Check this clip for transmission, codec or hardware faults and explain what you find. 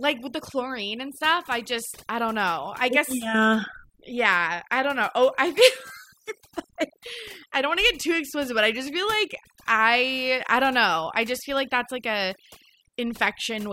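The clip shows one fault, overdone noise removal, present throughout. A noise reducer set far too aggressively switches off individual frequency bands whenever they sit near its noise estimate, taking quieter speech detail with them. The background drops and breaks up into twinkling specks.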